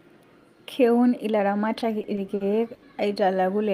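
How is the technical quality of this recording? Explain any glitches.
The speech is interrupted by one glitch, a burst of repeated stalls (stutter) between 1.79 and 2.84 s. Packets arrived late, draining the jitter buffer five times; the receiver stretched the last sound to fill about 190 ms, the longest gap 80 ms. Nothing is lost, but the passage drags and hiccups.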